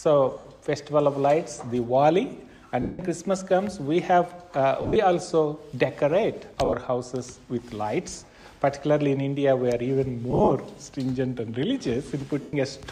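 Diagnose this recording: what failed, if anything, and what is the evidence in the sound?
The Bluetooth link is dropping packets, giving lost LE Audio frames at 0.38, 2.82, 4.82, 6.65, 10.31 and 12.42 s. The LC3 decoder patches each 70 to 170 ms gap by recycling the last spectrum with scrambled signs, so the sound smears into fading noise. The 4.82, 6.65 and 10.31 s losses come in scattered short bursts.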